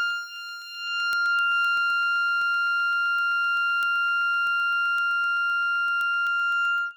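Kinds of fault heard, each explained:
Word clock ticks: an unlocked receiving clock drifts about 200 ppm from the sender, slipping one sample roughly every 0.15 s, so ticks run throughout the music.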